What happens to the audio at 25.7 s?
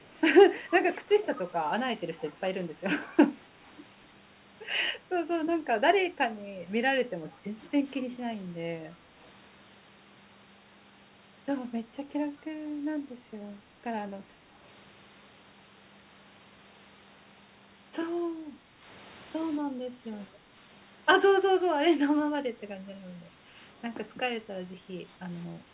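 From 25.64 to 25.73 s, the background is gated by the echo canceller. The loudspeaker was playing, so the canceller pulled the microphone down to suppress echo. The room sound dips by about 5 dB for roughly 70 ms, then recovers.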